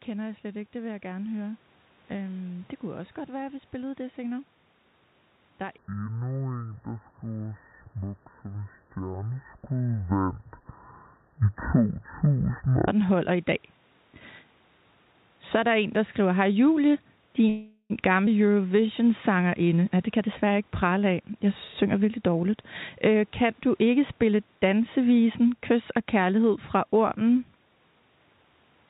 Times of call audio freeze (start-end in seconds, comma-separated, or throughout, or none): 17.49-17.92